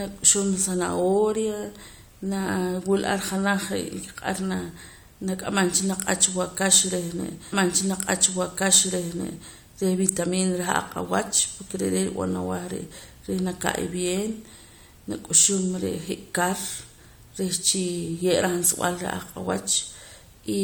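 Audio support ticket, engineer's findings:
Stream segment repeated, 7.52 to 9.52 s. Speech jumps back and replays about 2.0 s of programme, small blip at the jump. Probable component: player fetch/queue logic, same segment requested or buffered twice, adding 2.0 s to the timeline.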